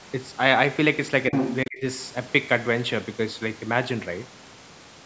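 From 1.32 to 1.56 s, a second voice comes through alongside the speech. This is the other side's voice leaking through. It sits at roughly the same level as the talker. The likely cause is loudspeaker echo that the echo canceller failed to remove from the microphone.

From 1.65 to 1.85 s, the speech is suppressed in double talk. The talker's voice drops sharply, by around 30 dB at its deepest, for about a fifth of a second. Both sides were likely talking at once, so the canceller turned everything down.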